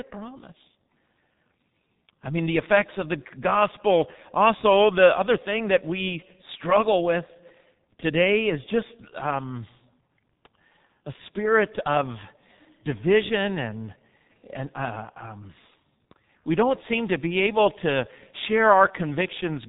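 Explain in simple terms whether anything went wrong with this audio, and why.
Something did go wrong, and it lasts the whole clip. The speech went through the G.723.1 codec, an old internet-phone format. It keeps nothing above about 3.8 kHz, so voices sound muffled and hoarse. The damage is heavy, and consonants smear together.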